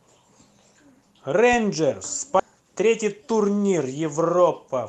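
At 2.39 to 2.41 s the speech suffers a skip ahead: roughly 0.7 s of audio is simply gone, and playback lurches forward as the sound on either side is butted together with no silence and no filler. This differs from a dropout, which would leave an audible hole or concealment noise. Here nothing is heard at the join. The jump points to queued audio being discarded so the call path could catch up, shortening the delay by about the same amount.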